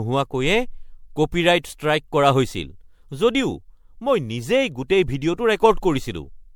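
From start to finish the speech carries a swirly, hollow character, with consonant attacks smeared and a watery texture that is heavier than a single encode would leave. Content stops at about 19.9 kHz. This is most likely generation loss: an MP3 encoded and decoded around seven times, in a way that points to 96 kbit/s, with each pass requantising on a shifted frame grid so that noise and spectral gaps accumulate.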